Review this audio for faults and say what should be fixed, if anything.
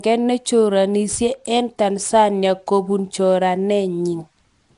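Nellymoser compression, throughout: the speech has a rough, hissy halo and a smeared, underwater quality, with nothing above 10.6 kHz. This is likely the Flash-era Nellymoser Asao codec, whose fixed two-bit coding starves weak bands and fills them with noise, at a rate that fits about 44 kbps. To prevent it, record or export with a modern codec at a generous bitrate instead of this legacy microphone codec.

Sample clock jitter, from 1.09 s to the end at 4.78 s: an unsteady converter clock takes samples slightly early or late, around a few microseconds of timing error. Fast-moving parts of the waveform suffer most, so a roughness roughly 25 dB below the speech rises with loud, bright sounds and disappears in pauses. To prevent it, run the converter from a stable, low-jitter clock source.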